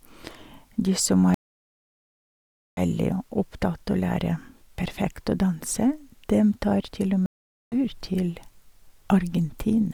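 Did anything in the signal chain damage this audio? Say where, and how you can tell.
Yes. The damage is at the network stage: two stream reconnects in this speech. The audio drops to silence from 1.34 to 2.80 s (about 1.43 s) and from 7.26 to 7.76 s (about 0.46 s). Each time the speech resumes further on, roughly 0.7 s and 0.4 s later. A plain dropout would continue where it left off. Here the player lost the connection, rejoined the live stream at its current position and restarted its decoder.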